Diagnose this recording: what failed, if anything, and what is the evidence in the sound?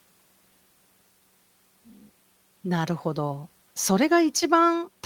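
Listening closely to the speech, nothing stood out that would point to a failure at any stage of the chain.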